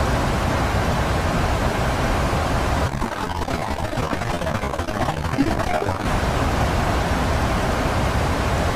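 From 2.87 to 6.06 s the sound turns choppy and robotic. This is repeated packet loss: short gaps, none longer than 26 ms, were patched by continuing the previous sound.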